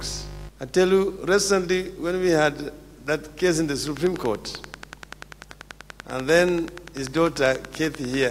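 A train of clicks runs from 3.87 s to 8.24 s: about fifty similar pops at a steady 10.3 per second, peaking roughly 10 dB above the audio, likely from nearby equipment interference. On a spectrogram they appear as evenly spaced thin vertical lines; in the waveform, as regular sharp spikes.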